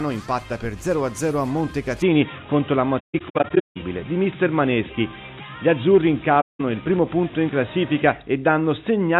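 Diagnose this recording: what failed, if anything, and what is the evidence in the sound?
From 2.02 s to the end, the sound turns dull and boxy. Nothing remains above 3.8 kHz. A new background noise appears about 50 dB below the signal, and the level shifts by about 5 dB. There is no gap at the changeover. This is an input switched to a poorer device, at the driver stage. The likely cause is the system moving to another microphone or a headset's call profile, which passes a narrower band.

The second fault is at the codec stage: AAC frame loss with muting. Between 2.99 s and 3.77 s, the sound drops out in scattered holes. About 490 ms is missing in all, spread across 768 ms. The longest run lasts about 150 ms. A second hole runs from 6.41 s to 6.61 s and is 192 ms long. Each hole fades out and back in softly. The decoder zeroed the spectrum of the lost frames, and the overlapping windows blend the edges over about one frame.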